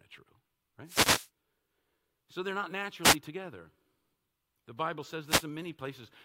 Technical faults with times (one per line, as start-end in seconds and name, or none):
0.84-1.30 wireless microphone noise hit
3.02-3.16 wireless microphone noise hit
5.26-5.46 wireless microphone noise hit